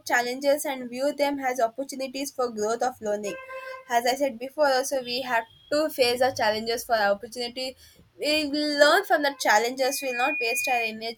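From 9.81 s to 10.95 s a loudspeaker feedback squeal rises over the speech: the microphone is picking up its own loudspeaker, and at 2.4 kHz the loop gain exceeds one, so that frequency reinforces itself. A pure whistle swells over roughly 0.4 s until it is about as loud as the speech. On a spectrogram it appears as a single thin horizontal line at 2.4 kHz brightening steadily. The waveform's envelope bulges into a dense, regular oscillation.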